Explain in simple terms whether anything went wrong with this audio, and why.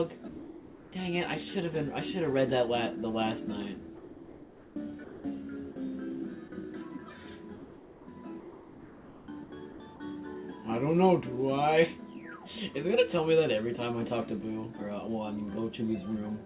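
Several things went wrong, all tied to the sending side deciding when sound was worth sending.

Sound dropped by the voice detector happens five times: 0.28 to 0.92 s, 3.96 to 4.76 s, 5.04 to 5.24 s, and two brief gaps at 5.72 s and 6.48 s. Each time, real sound gives way to a steady hiss and then returns. The likely cause is the detector mistaking quiet sound for background and stopping transmission. In the first two gaps about 0.3 s of actual sound is lost.

Comfort noise in place of the background appears from 7.56 to 8.08 s. Nothing important is cut here. But the real background, with its small details, turns into a plain, even noise that is slightly quieter. This is likely the receiver filling a paused stretch with made-up noise shaped to match the room.

Sound chopped by the voice detector runs from 8.4 to 10.0 s. Here the sending switches on and off more than once. Over a second of that stretch is swapped for filler noise. 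The result is choppy, broken sound. The likely cause is the detector switching back and forth between sending and not sending.

Throughout the clip the call connection also keeps only sound below about 4 kHz, so everything sounds a little narrow, like a phone line.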